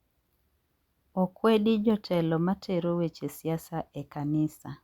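Nothing in this short bit of speech stands out as a technical fault, so there's nothing here to flag.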